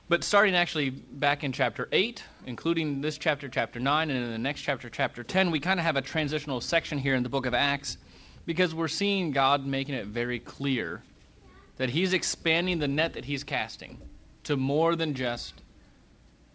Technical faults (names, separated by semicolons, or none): none